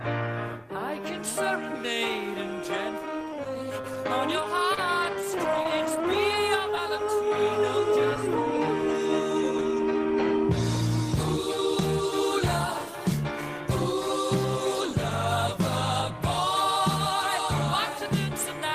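From 3.81 to 6.35 s, scattered short gaps: about four lost packets, the longest around 20 ms, patched by extending the preceding sound. Each shows as a brief smeared band or notch in the spectrogram.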